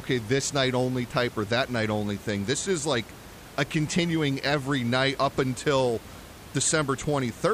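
No technical faults can be heard in the signal, and the only background is the room's own noise, sitting about 19 dB below the speech.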